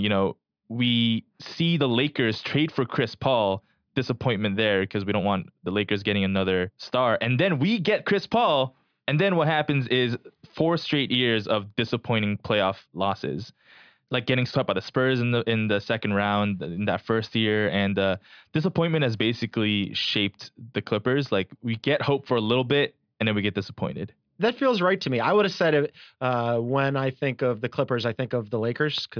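No technical faults are audible anywhere in this recording.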